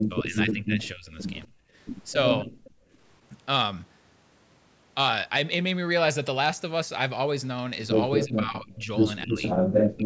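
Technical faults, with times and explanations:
0.0–1.17 s, 2.13–2.56 s and 8.26–10.05 s: speech suppressed in double talk. The echo canceller most likely couldn't separate this talker from loudspeaker echo while both sides spoke, so it pulled the speech down by about 15 dB, 30 dB and 25 dB, leaving it dipping and breaking into pieces.
0.83–0.88 s, 2.65–2.70 s and 8.20–8.26 s: echo leak. Loudspeaker sound likely slipped past the far end's echo canceller and came back as brief scraps of voice delayed about 240 ms, at about 25 dB, 30 dB and 10 dB below the speech.
1.48–1.75 s and 2.84–2.91 s: background gated by the echo canceller. With the loudspeaker active, the canceller clamped the microphone, so the room sound drops by about 29 dB and then about 14 dB and returns as the canceller releases.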